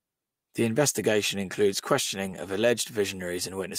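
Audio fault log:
2.25–2.35 s, lost packet rebuilt from error correction: packets were lost, and the decoder played low-bitrate copies carried in the following packets. The speech continues without a gap but sounds briefly rougher and noisier. About 60 ms rebuilt, which fits three lost packets.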